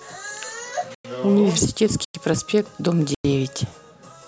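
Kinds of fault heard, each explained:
gap between chunks: the speech is played in one-second pieces with a 100 ms silence at each join, near 0.95, 2.05 and 3.15 s. No sound is lost, but each join cuts off abruptly. The waveform shows flat, hard-edged strips. The spectrogram shows clean vertical blank bands.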